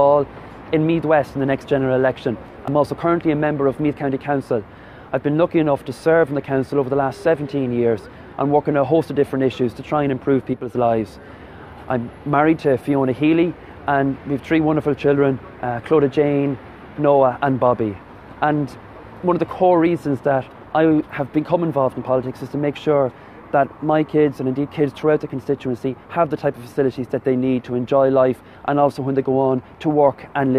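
The audio carries a single, brief fault: from 10.53 s to 10.75 s, roughly 0.22 s, the level falls abruptly by about 6 dB and then returns just as suddenly. This is consistent with one channel dropping out, the likely cause being a momentary loss of one stereo channel before a mono fold-down. With half the sum missing, shared content loses about 6 dB, and anything present only in the lost channel vanishes for that span.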